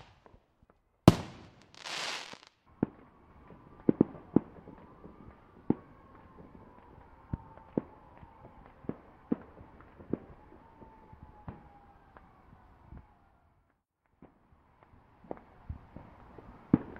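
Loud pops at 2.33–2.36 s and 7.34–7.36 s, each a single sharp pulse about 10 dB then 15 dB above the sound, likely a voltage spike from a switch, plug or static.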